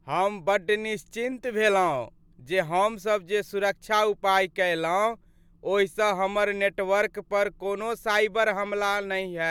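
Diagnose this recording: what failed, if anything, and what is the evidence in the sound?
No fault found in this recording.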